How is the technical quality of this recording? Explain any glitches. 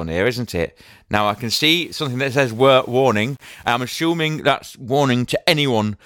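The speech has one clear glitch. From 1.17 s to 4.40 s, right after "here isn't it", it turns grainy. That's low bit depth without dither, and it sounds like an 8-bit word length with plain rounding is the likely cause. With so few steps and no dither, the rounding error tracks the speech, so the grit sits roughly 35 dB down and shifts with every syllable. The quiet tails and pauses get rough and sputtery, and some drop out to silence.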